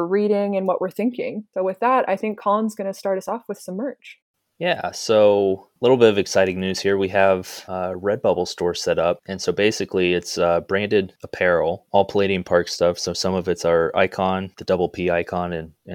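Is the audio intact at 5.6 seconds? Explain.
Yes, the audio is intact at 5.6 seconds, with no dropout, click, distortion or other audible fault at that moment.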